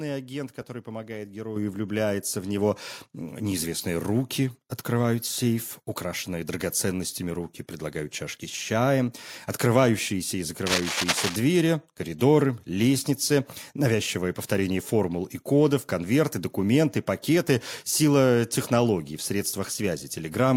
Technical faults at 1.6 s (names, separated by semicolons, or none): microphone volume stepped up